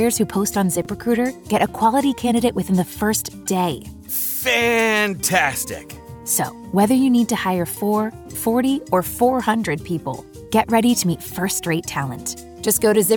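Chunks out of order occur at 0.82–0.86 s and 6.31–6.34 s. In each, a 10 ms block of audio plays late: three blocks behind at 0.82 s, two behind at 6.31 s. Nothing is lost, but the reshuffled order creates hard joins, heard as a brief jumbled stutter.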